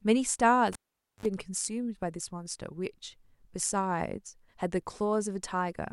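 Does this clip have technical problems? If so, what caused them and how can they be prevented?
Yes. A cable pulled and plugged in interrupts the speech from 0.73 to 1.26 s. A pop marks the moment the live connector comes out. About 0.48 s of near silence follows while the signal path is open. Then comes a burst of 50 Hz mains buzz lasting about 51 ms, as the plug's tip touches the socket before the ground makes contact. A second pop follows as the sound returns. To prevent it, mute the channel or lower the gain before patching any cable.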